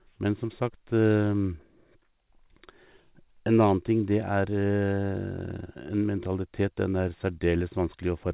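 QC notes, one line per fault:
No fault in this speech clip, which came over a call path with nothing above 4 kHz.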